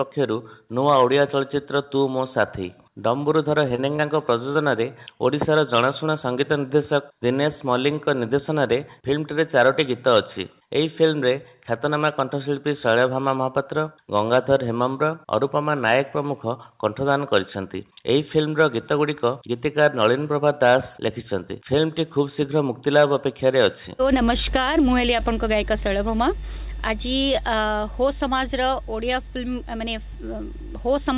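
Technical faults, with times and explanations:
3.68 to 4.57 s, short concealed packet loss: four 20 ms gaps, at 3.68, 3.76, 3.96 and 4.53 s. The receiver patched each by extending the preceding sound, then blended back. This causes brief smears or wobbles. At 3.96 s, 13 ms of real audio is also cut.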